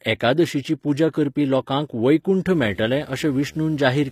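A speech clip in which the treble was likely rebuilt by HE-AAC spectral band replication: upper bands are copied from lower ones and shaped coarsely, so harmonics fail to line up above the crossover and s sounds come out plainly gritty and metallic, consistent with a low bitrate near 24 kbps. From 2.52 s to the end, a screen or video cable couples into the audio as video or display buzz: a 75 Hz buzz at the picture's field rate with hash above it, sitting roughly 25 dB under the speech.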